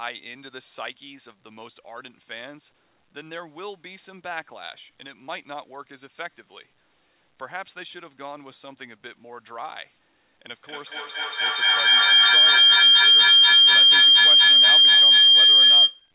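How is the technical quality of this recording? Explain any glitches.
The recording has a serious fault: a feedback howl fills its final stretch. The whole clip is band-limited at 4 kHz, which fits a narrowband G.711 call path.

From 10.5 s to 16.12 s, feedback howl builds. Two devices in one room share the call, so each microphone-to-loudspeaker trip adds level. The repeats narrow to a tone around 3 kHz, with the loop coming round roughly every fifth of a second, and peak about 20 dB above the speech.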